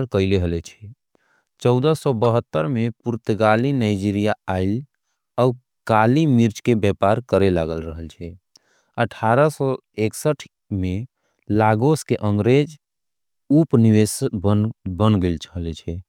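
A corrupt frame decoded in this speech recording: at 2.25 s, a single compressed frame reached the decoder with damaged bits, and the decoder played it without rejecting or concealing it. Misread gains and codes sent energy to the wrong frequencies for roughly the length of that one frame, so a brief chirp or blip is heard, peaking at about -15 dBFS.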